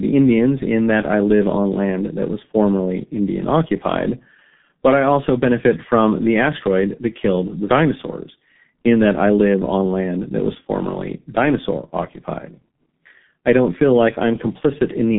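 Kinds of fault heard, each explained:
G.723.1 codec: The whole clip runs through a very low-rate telephony codec. The damage is heavy. The sound fits a rate of about 6.3 kbit/s. Energy survives only between 150 Hz and 3.6 kHz, so the low body and the upper air are both gone. The codec models the voice in long frames and refreshes that model slowly. As a result, the speech sounds dull and rough, and consonants smear together.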